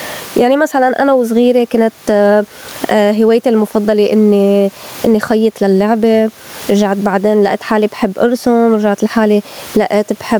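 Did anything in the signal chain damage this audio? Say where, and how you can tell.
Yes. Gain pumping runs through the whole speech clip: the gain swings by around 20 dB, so loud and quiet passages sit squashed close together. The likely cause is input gain set far too high at the microphone stage, with a fast limiter or compressor in the capture or call processing pulling the level down on each loud sound. The room noise itself, about 36 dB below the speech, is part of the recording.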